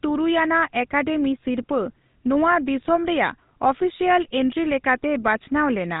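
Throughout the speech, a GSM full-rate codec imposes a buzzy, gravelly roughness and nothing above 3.8 kHz, unlike clean band-limiting, consistent with roughly 13 kbps coding.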